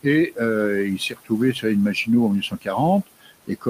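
Noise suppressor artifacts run throughout: the room noise, about 19 dB under the speech, is pulled down about 17 dB between phrases and swells back underneath them. Speech is cut by the noise suppressor at 0.27–0.41 s, 0.98–1.32 s, 2.41–2.68 s and 3.07–3.31 s. Quiet speech is mistaken for noise and dropped by about 15 to 17 dB, so those stretches sound swallowed and faint.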